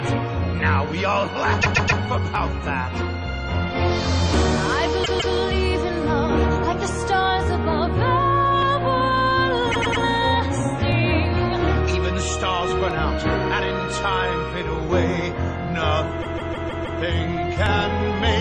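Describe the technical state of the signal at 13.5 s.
At 13.5 s the signal is intact, with no audible fault of any kind at that point.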